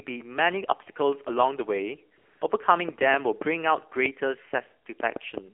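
Speech heard through the AMR narrowband mobile codec, confined to a 250 to 3400 Hz line band, with an audibly buzzy, synthetic quality that fits a low AMR-NB mode around 7.4 kbps. On a spectrogram, nothing appears above 3.4 kHz, and formants look smeared into blocky 20 ms frames. From 2.18 to 2.42 s, AMR comfort noise replaces 240 ms of the real signal. The sending end judged that stretch silent and stopped transmitting speech frames, so the receiver generated a smooth, even noise bed. It shows as a flat, featureless grey patch with abrupt edges. From 2.89 to 5.39 s, a train of clicks ticks over the sound at an uneven pace of about 3.2 per second, roughly ten in all, with peaks around 15 dB above the signal. These appear as sharp vertical spikes on the waveform and full-height stripes on the spectrogram, likely from electrical interference or a struggling interface.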